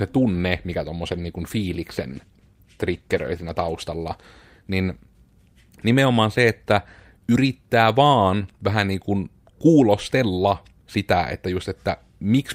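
From 1.11 to 3.93 s a call bitrate drop made the encoder code the speech more coarsely, consistent with a fall from 48 to 18 kbps, before quality returned.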